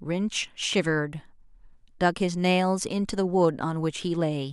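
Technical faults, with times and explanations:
No technical faults detected in this speech recording.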